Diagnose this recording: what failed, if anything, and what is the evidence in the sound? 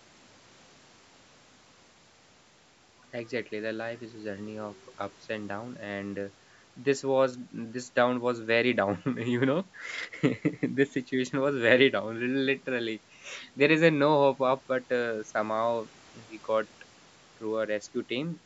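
Nothing failed here: the speech just carries the ordinary marks of a call's microphone processing, with the lowest bass trimmed by its high-pass filter and nothing above 8 kHz, and that's exactly how that stage is meant to behave.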